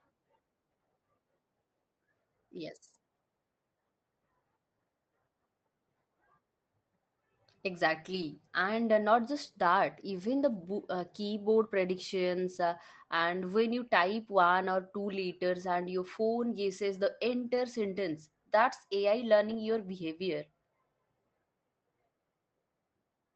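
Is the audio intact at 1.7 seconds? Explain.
Yes, the speech at 1.7 seconds is intact, carried cleanly through the call path with no dropout, glitch or other fault at that moment.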